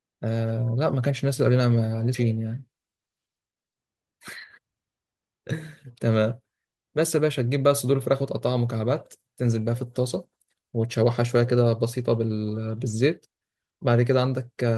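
A skip ahead at 2.14 s in this speech clip drops roughly 300 ms of audio, with playback jumping straight to later material that was already buffered. The two sides are joined with no gap, which fits an overflowing jitter buffer discarding a backlog.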